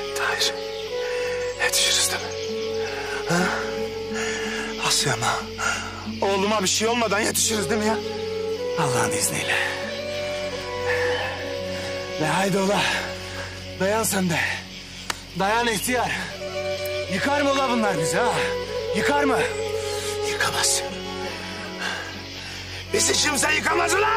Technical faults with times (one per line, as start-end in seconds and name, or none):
none